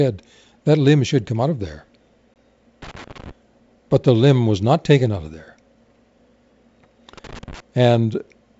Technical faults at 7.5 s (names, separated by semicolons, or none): loose connector crackle